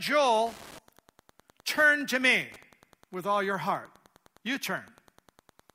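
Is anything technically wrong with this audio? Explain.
Yes. Throughout the speech there is Wi-Fi interference: a nearby radio's beacon, every 102.4 ms, is rectified by the audio circuit, producing steady faint ticking about ten times per second, roughly 30 dB below the speech.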